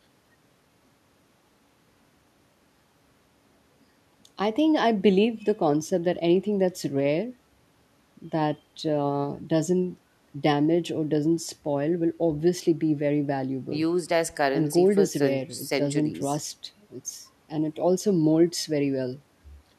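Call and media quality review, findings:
No faults found: the speech signal holds steady level, continuity and timing, with nothing to raise against capture, transport or playback.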